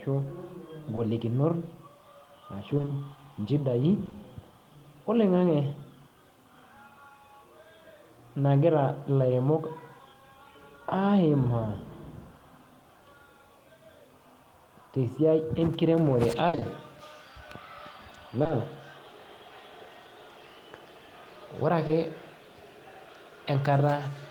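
A brief smear or wobble at 0.95 to 0.99 s is short concealed packet loss: about 20 ms of speech never arrived, and the receiver covered the hole by extending the preceding sound before blending back. The same glitch recurs at 4.05 to 4.13 s, 18.43 to 18.51 s and 21.87 to 21.91 s.

From 2.77 to 2.89 s the speech turns choppy. This is repeated packet loss: three gaps, each patched in turn, leave half of that stretch synthetic. At 16.47 to 16.63 s it is worse, with three gaps, the longest 60 ms, covering about 62% of the span.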